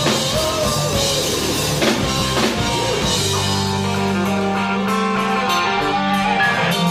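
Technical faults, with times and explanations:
2.19–2.22 s, lost LE Audio frames: about 30 ms, fitting three 10 ms frames, dropped out; the LC3 decoder reused the last spectrum with random signs, leaving a brief noisy smear.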